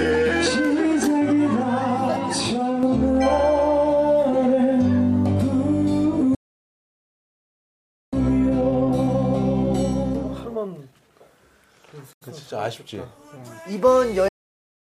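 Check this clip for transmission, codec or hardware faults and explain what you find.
Two playback faults are present, both from the delivery side: the output drops out twice, and after the first gap the audio runs fast for a while.

Playback stall, 6.35 to 8.13 s and 14.28 s to the end: the sound cuts off mid-flow and goes silent for about 1.78 s, then later for about 0.71 s until the clip ends. This is likely the player running out of data or its output thread being blocked.

Time-compressed catch-up, 8.13 to 11.13 s: after the first gap, the player trims its backlog by cutting out small pieces and cross-fading across them. The audio plays at 1.15 times normal speed with its pitch unchanged.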